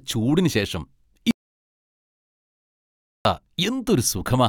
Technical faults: audio dropout to silence

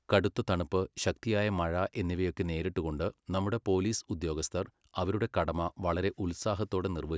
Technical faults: none

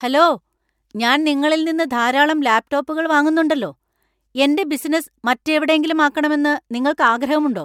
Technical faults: none

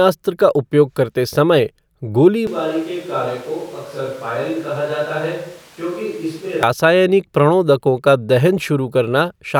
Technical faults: switch to a distant microphone

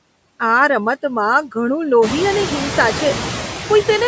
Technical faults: noise suppressor artifacts

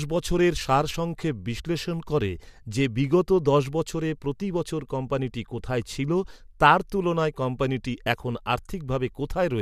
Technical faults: none

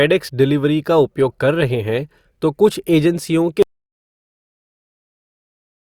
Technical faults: audio dropout to silence

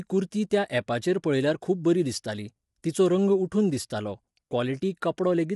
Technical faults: low-delay AAC compression; pre-echo

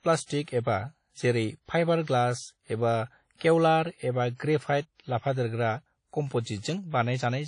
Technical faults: WMA compression; pre-echo

